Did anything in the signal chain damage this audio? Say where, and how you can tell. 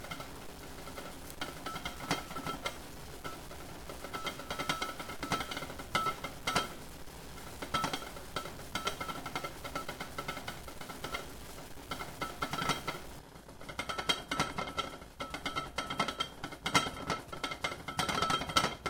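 Yes. A stuck bit runs from 0.0 to 13.19 s: grainy noise rides on the sound, and quiet stretches fill with noise. The likely cause is a converter or data line holding one low-order bit fixed, so values jump by a step of roughly -45 dBFS.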